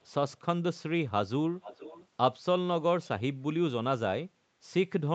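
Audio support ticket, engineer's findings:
Echo leak, likely a far-end loudspeaker whose echo canceller let the mic pickup through and sent it back. Very faint delayed copies at 0.02 s and 0.31 s, about 0.41 s behind. Clearer doubled speech 1.61–2.07 s, about 15 dB below the speech, delayed about 0.46 s.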